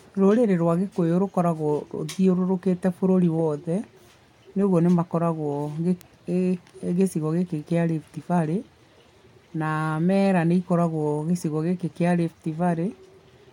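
A single sharp tick at 6.01 s, loud at about -14 dBFS, and a much fainter one at 7.59 s, about -32 dBFS, just after "gĩcigo gĩkĩ", are both bit error spikes in this speech. Each is one sample whose value jumped by a power of two and then returned, because a single bit flipped in memory or on a digital link. The tick is broadband and bears no relation to the speech around it.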